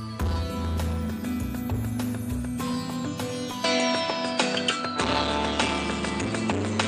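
At 3.64 s the sound abruptly turns duller and boxier, with no gap at the join, and stays that way to the end. From that point nothing reaches above 9.2 kHz, the level shifts by around 5 dB, and a new layer of background noise appears, roughly 30 dB under the signal. This is likely an input switched to a poorer device: the recording jumped mid-take to a different, narrower-band microphone with its own tone and noise floor.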